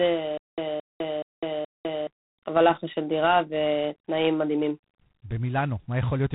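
From the start, the speech carries a harsh, rasping hiss that rises and falls with its level, with nothing above 3.9 kHz. This is G.726 ADPCM, and the coarse coding of each sample's prediction error fits the 24 kbit/s rate. From 0.37 to 2.07 s comes a stutter with silent gaps: a 220 ms fragment plays four times, each followed by 204 ms of digital silence, repeating every 424 ms. A stalled stream likely replayed its last fragment at each retry, and the audio due in that time is lost.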